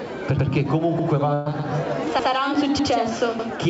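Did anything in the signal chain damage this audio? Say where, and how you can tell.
Yes. Overlapping chunks at the driver or buffer stage cause a stutter at 0.39, 0.99, 1.59, 2.19, 2.79 and 3.39 s. At each point, 100 ms replays. The 0.6 s spacing fits 0.5 s chunks, each starting before the previous one ends. The waveform shows identical 100 ms shapes back to back, and the spectrogram repeats the same short pattern.

A burst of packet loss on the network leg runs from 1.34 to 1.48 s. About 120 ms never arrived. The receiver stretched the last sound and faded it, then jumped ahead. On the spectrogram, smeared, decaying bands stop abruptly below the G.722 call path's 8 kHz ceiling.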